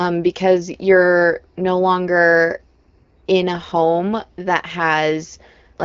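No technical faults can be heard in this speech clip. It comes through an AMR wideband (HD Voice) codec at 12.65 kbit/s, so the audio is band-limited with nothing above about 6.8 kHz, and only light coding damage is audible at that rate.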